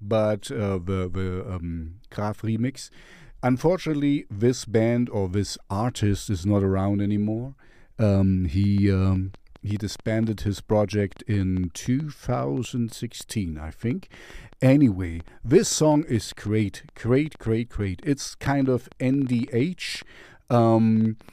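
From 8.64 s to 21.30 s, a train of clicks runs over the speech. They arrive about 6.1 times per second, at an uneven pace, roughly seventy in all. Each click has much the same short, sharp shape. They peak at about the level of the speech itself. The ticking continues through pauses as well. The likely cause is interference from nearby equipment or a faulty connection or power supply injecting repeated pulses.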